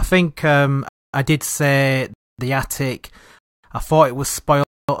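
The speech stops dead four times, at 0.89, 2.14, 3.39 and 4.64 s, each hole lasting 250 ms: after "think um", after "um I did say", and after "I thought it was". This is a gap between chunks. Each second of audio arrives intact, but silence is inserted at every join. Unlike a dropout, nothing is missing: speech resumes exactly where it stopped, with hard edges and an even rhythm.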